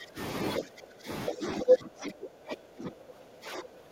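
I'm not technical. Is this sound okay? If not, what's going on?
No, not quite. The main problem is speech suppressed in double talk: the voice dips sharply at 0 to 0.19 s, 0.59 to 1.09 s, and from 1.29 s to the end. It's likely the call's echo canceller turning everything down while both people talked at once.

There's also a brief case of the other side's voice leaking through, from 1.61 to 1.74 s. A short scrap of a second voice comes through, likely loudspeaker sound the microphone picked up and the echo canceller didn't fully clean out.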